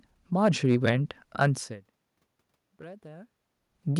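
Hard clipping occurs twice in this speech. From 0.45 to 0.89 s the signal is driven about 5 dB past what a stage in the chain can pass, and from 2.81 to 3.13 s it overshoots by about 4 dB. The peaks are sliced flat, which adds harmonics high in the spectrum, so both stretches crackle on the peaks of the louder syllables. The level change near 1.5 s is the talker moving relative to the microphone.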